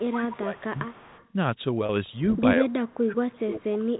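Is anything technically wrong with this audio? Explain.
Yes, three kinds of fault are audible.

Echo leak appears at 0.00–0.09 s, 0.29–0.37 s, 0.57–1.28 s, 2.34–2.40 s and 3.94–4.00 s as a faint copy of the speech trailing by 149 ms. It is strongest near 0.3 s, at roughly 15 dB down, and weakest at the end, roughly 35 dB down. The likely cause is a far-end loudspeaker whose echo canceller let residual pickup return.

Speech suppressed in double talk affects 0.09–0.77 s, dipping by roughly 15 dB, and 2.58–3.99 s, dropping by as much as roughly 30 dB. The speech sinks, likely because the echo canceller could not separate talker from echo and attenuated both.

Packet loss with pitch repetition occurs at 1.86–1.89 s: a 30 ms gap, consistent with a single lost packet. The receiver bridged it by repeating the last pitch cycle, giving a brief held, buzzy tone before the speech resumes.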